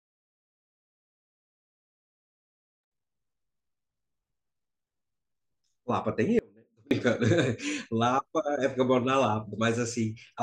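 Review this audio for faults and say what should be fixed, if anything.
An audio dropout to a faint residue runs from 6.39 to 6.91 s, about 0.52 s. The speech cuts out abruptly. Only a faint trace remains, roughly 30 dB down. The likely cause is a brief upstream signal loss while later stages stayed live. Secure the cables and check the wireless link or source connection.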